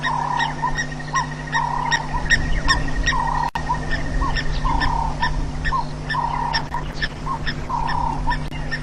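CD scratch ticks appear from 0.39 to 0.96 s: four short clicks, the longest around a millisecond. A blemish on the disc wiped out more data than the player's error correction could rebuild, and the damaged spot returned with each rotation. Each time, the player had to interpolate over or mute the missing samples. The result is a small, evenly spaced train of ticks, each a brief break in the sound.

A call bitrate drop follows from 6.51 to 7.89 s. The connection's bandwidth estimate fell, and the encoder was forced to spend far fewer bits on the audio. The sound turns coarse and muffled, with the top end shaved away, which points to a fall from roughly 128 kbps to about 12 kbps. It stays at its worst for about 1.3 s before the bitrate climbs back.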